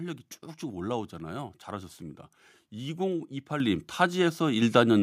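The call software's automatic gain control judged the microphone too quiet and stepped its input volume up twice, by about 7 dB at 3.6 s and about 4 dB at 4.62 s. Each step makes the speech and background noise jump louder together, abruptly.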